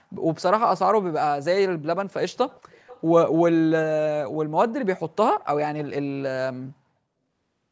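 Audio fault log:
2.31–3.02 s: echo leak. The far end's loudspeaker output was likely not fully removed by its echo canceller, so a residue was sent back, a faint copy of the speech trailing about 0.41 s behind, sitting well below the main voice.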